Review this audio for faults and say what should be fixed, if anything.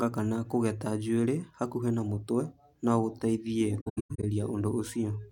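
AAC frame loss with muting appears between 3.80 and 4.24 s. The speech drops out in several separate gaps spread over about 430 ms, totalling about 320 ms of silence, with the longest single gap around a tenth of a second. The pattern points to a run of lost AAC frames whose spectra the decoder replaced with zeros. The overlapping transform windows then fade the signal down and back up at each gap's edges, so the holes sound soft rather than sharply cut. To prevent this, carry the stream over a more reliable transport or add forward error correction and retransmission, and use a decoder with proper concealment instead of muting.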